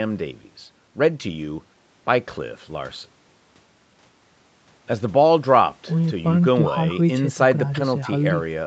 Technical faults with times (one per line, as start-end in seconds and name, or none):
none